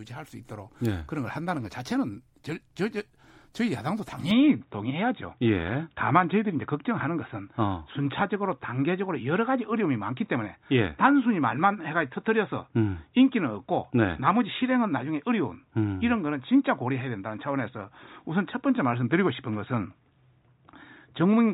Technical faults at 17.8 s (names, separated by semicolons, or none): input switched to a poorer device